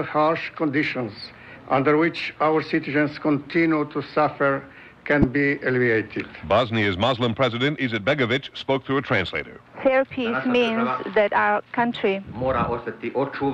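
At 5.22–5.24 s and 10.67–10.69 s, corrupt frame decoded: misread bits misplace energy, giving a chirp, squeak, blip or burst of noise seen as brief vertical smears, the first loud, the second about 15 dB quieter.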